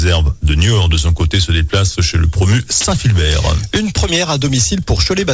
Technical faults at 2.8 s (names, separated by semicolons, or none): sound dropped by the voice detector